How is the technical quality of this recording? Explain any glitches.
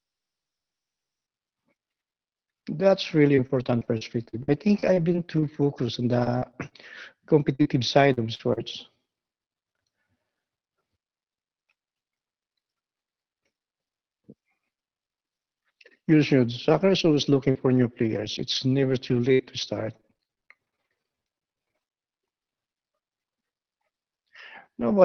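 The recording has clear network damage in three stretches, plus a brief slow-down near the end.

Repeated packet loss (robotic sound) affects 3.35–6.73 s, 7.41–8.59 s and 16.69–22.00 s. Audio kept going missing or arriving late, and the receiver patched each hole by extending the last bit of sound. Holes last up to about 60 ms, and up to 17% of a stretch is rebuilt. The speech turns choppy, with fragments dropping out, worst in the final stretch.

A jitter buffer slow-down runs from 21.34 to 22.18 s, overlapping the end of that last loss stretch. With its reserve running low or its target delay just raised, the buffer repeated tiny slices of the signal to build delay back up, adding 68 ms. The speech plays at about 93% speed at unchanged pitch, so sounds are drawn out slightly.

Through all of this, the Opus call path limits the audio to about 6 kHz.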